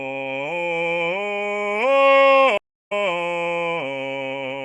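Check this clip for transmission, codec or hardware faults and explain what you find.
One fault is present, a stream reconnect. At 2.58 to 2.92 s the connection dropped and a new decoder restarted mid-stream. About 0.31 s of silence follows, and the music resumes roughly 0.4 s further on.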